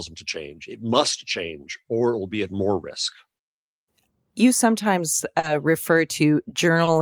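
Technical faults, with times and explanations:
5.39–5.46 s, short concealed packet loss: about 40 ms of the speech never reached the decoder in time, so the receiver extended the preceding sound to cover the gap and blended back into the real signal. The result is a brief smear, and the missing 40 ms is gone.
6.84–6.90 s, short stall from a late packet: a packet arrived about 30 ms late and the jitter buffer ran dry. The receiver held the last sound for roughly 30 ms until the packet arrived, then continued from the same point, so nothing is lost but that sound is drawn out unnaturally.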